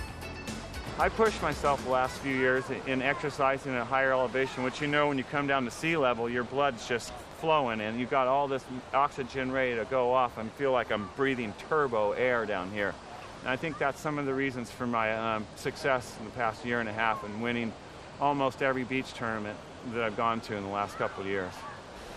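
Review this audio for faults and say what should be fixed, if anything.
Nothing here needs fixing; I listened all the way and didn't hear anything go wrong.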